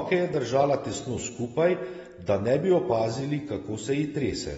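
From start to finish the speech sounds dull and smeared, with nothing above 7.6 kHz and a fizzy, warbling texture on sibilants. That points to low-bitrate AAC-LC compression as the likely cause, roughly 24 kbps, unlike a simple low-pass filter, which would not warble.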